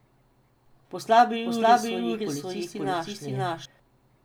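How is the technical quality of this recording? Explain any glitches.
The recording has one clear fault, a doubled audio track, from 1.46 s to 3.66 s. Over that stretch a second copy of the speech plays about half a second behind the first, at roughly the same level. The likely cause is a second capture path running late or an edit that left two misaligned copies. The delayed copy has full bandwidth and no reverberant tail, so it sounds like a clean, overlapping repeat rather than an echo, and it cuts in and out abruptly at both boundaries.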